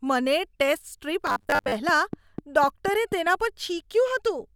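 From 1.27 to 1.76 s the speech turns into a rigid metallic buzz at 100 Hz: robotic sound from repeated short buffers, likely from audio arriving too seldom and a 10 ms chunk being looped, with about half the material replaced by repeats. A spectrogram shows evenly spaced horizontal harmonics; the waveform shows identical repeating cycles.

From 1.89 to 3.13 s a train of clicks follows, around seven sharp pops at a regular 4.1 per second, peaking roughly 10 dB above the signal. On a spectrogram they appear as thin vertical broadband lines; the waveform shows isolated narrow spikes.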